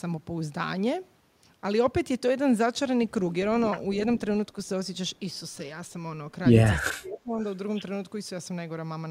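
At 3.92 to 3.96 s a faint delayed copy of the speech surfaces, an echo leak arriving 319 ms after the original at around 30 dB below it. This is most likely a loudspeaker echo the far end's canceller failed to remove. It is a distinct repeat, unlike the smeared tail of room reverberation.

From 6.82 to 7.39 s the speech suppressed in double talk shows up as the level sinking by roughly 25 dB across about half a second. This is likely because the canceller mistook overlapping talk for echo and turned everything down.

A second echo leak follows at 7.40 to 7.45 s, delayed 352 ms and about 35 dB down. It is again a separate repeat rather than a reverberant decay.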